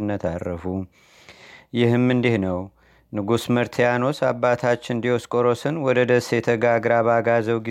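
A speech recording with no audible technical faults anywhere in the signal.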